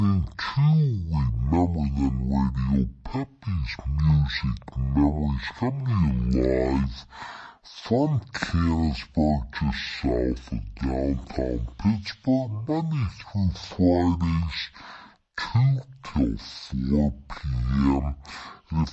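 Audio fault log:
throughout wrong sample rate: unconverted playback at half the recording rate, fitting 48 kHz played at 24 kHz; speech runs half speed, 12 semitones low.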